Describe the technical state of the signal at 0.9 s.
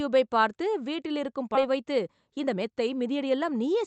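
At 0.9 s the speech signal is intact, with no dropout, glitch or distortion, only the ordinary coding character of a call path whose Opus codec limits the bandwidth to 8 kHz.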